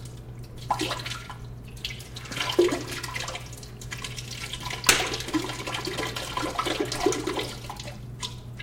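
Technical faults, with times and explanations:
No technical faults detected anywhere in the audio.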